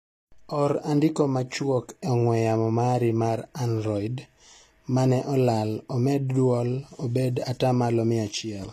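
From start to finish the speech has gritty, lispy s sounds and treble cut off above 14.9 kHz, likely HE-AAC compression at a low bitrate, around 24 kbps, rebuilding the highs.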